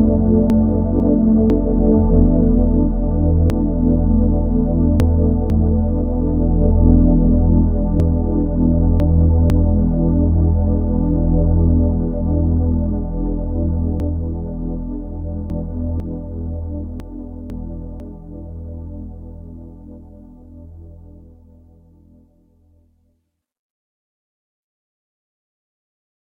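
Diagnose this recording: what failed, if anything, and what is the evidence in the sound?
The failure is chunks out of order, at the buffer or transport stage: a 500 ms chunk arrived or was written late and plays after the chunks that should follow it. The sound jumbles at 0.5–1.5 s, 3.5–5.5 s, 8.0–9.5 s, 14.0–16.0 s and 17.0–18.0 s, with the late chunk displaced by one, three, two, three and one chunks respectively. Each event leaves three hard joins. Unlike a dropout or a repeat, nothing is missing and nothing plays twice; only the order is wrong.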